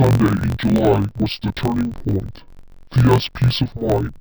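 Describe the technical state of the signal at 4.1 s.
At 4.1 s the speech is still affected by interleaved audio read as planar, a fault that runs through the entire clip. Each 21.77 ms block of alternating left and right samples is split the wrong way, its first half taken as left and its second half as right. Both halves then play at half speed, so the speech sits an octave low, sounds doubled, and carries a choppy flutter at the 45.9 Hz block rate.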